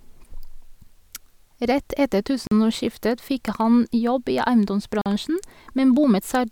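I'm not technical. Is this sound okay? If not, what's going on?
No. The speech stops dead twice, at 2.47 seconds and again at 5.01 seconds. Each hole lasts about 44 milliseconds. This is called a gap between chunks. The audio was handled in pieces about 2.5 seconds long, and a short silence got inserted where each piece joins the next. Nothing is missing from the speech itself. It is just pushed apart briefly at those two joins.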